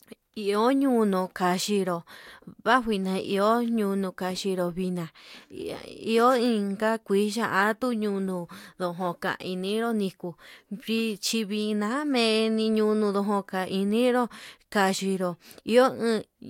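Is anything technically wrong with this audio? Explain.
No, nothing technically wrong here.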